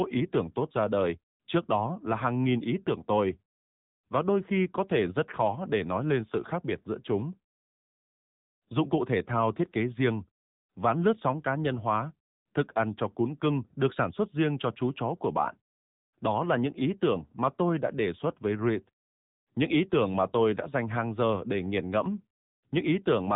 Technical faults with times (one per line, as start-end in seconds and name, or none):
0.00-23.36 AMR narrowband mobile codec